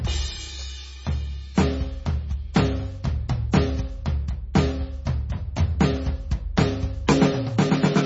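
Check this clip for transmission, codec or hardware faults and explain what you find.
A codec fault runs through the whole music clip. From start to end, nothing sounds above 7.6 kHz, and the remaining treble sounds watery and swirly, with smeared attacks. This is likely MP3 compression, with damage heavy enough to point to a very low bitrate of around 24 kbps. Starved of bits, the encoder cuts the top band and drops weak frequency lines that flicker between frames. A spectrogram shows a hard ceiling at 7.6 kHz and speckled, patchy energy below it.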